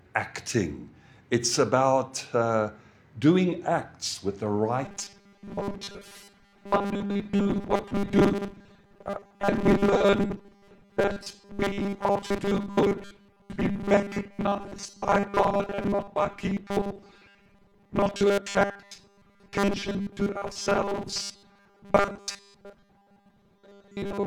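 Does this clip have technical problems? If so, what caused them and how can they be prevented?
Yes. From 4.85 s to the end, the sound turns into robotic sound from repeated short buffers, a rigid metallic buzz at 200 Hz. This is likely caused by audio arriving too seldom, so a 5 ms segment is replayed in place of most of the real audio. A spectrogram shows evenly spaced horizontal bands at multiples of 200 Hz, and the waveform shows identical 5 ms cycles. Larger buffers or a more reliable feed into the audio path would prevent it.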